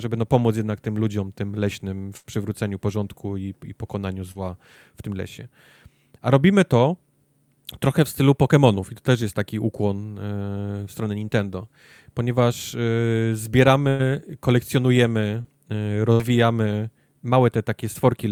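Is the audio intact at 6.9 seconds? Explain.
Yes, the audio is intact at 6.9 seconds, with no fault audible at that moment.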